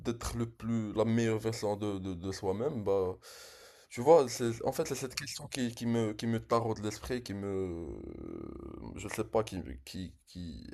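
No technical faults can be heard in the recording. Nothing in the speech points to a break or disturbance in the audio chain.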